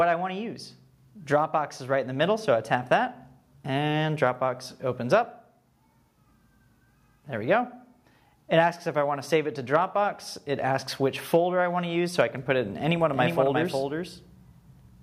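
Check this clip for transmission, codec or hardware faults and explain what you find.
One fault is present: a doubled audio track, starting abruptly at 13.13 s and running to the end. The signal is most likely being picked up a second time through a slower path, so a second, full-band copy of the same audio is mixed in roughly 400 ms behind the original and a few dB quieter. The delayed copy carries no decay or room colour, so every event is heard twice as a clean, distinct repeat.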